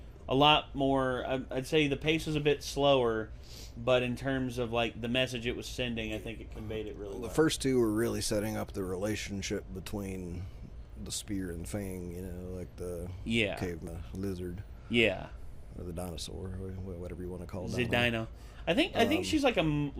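Damaged data in a compressed stream at 13.87 s makes the decoder misread a frame and lose sync, producing a brief defect in the audio lasting only a few milliseconds.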